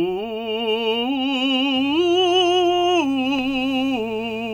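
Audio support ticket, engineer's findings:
Mains buzz, 1.75 s to end of clip. Sharp switching spikes, likely from a dimmer, rectifier or unshielded cable, entering the music path twice per 60 Hz cycle. Heard as a steady, raspy buzz with harmonics reaching several kHz, roughly 25 dB under the music.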